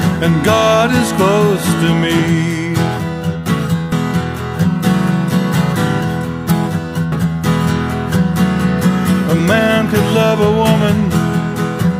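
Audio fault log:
3.92 s and 7.12 s, compressed frames skipped: at each point the audio jumps ahead, dropping roughly 30 ms at 3.92 s and about 200 ms at 7.12 s. With a 32 ms frame, that fits one whole frame and then around seven missing from the file or refused by the decoder as damaged. Unlike a dropout, no silence or gap is inserted. Material simply goes missing and the join is only a brief discontinuity, because the audio on either side abuts directly.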